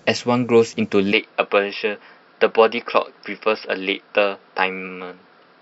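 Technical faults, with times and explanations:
1.12 to 5.62 s, input switched to a poorer device: from 1.12 s the speech turns duller and boxier, with nothing above 5.4 kHz, so sibilants lose their sharpness and airy detail vanishes. It happens without a gap and with no real jump in loudness, and a faint new background noise sits far below the speech. This is likely the recording switching mid-take to a narrower-band microphone or headset, whose limited bandwidth and own noise floor change the tone.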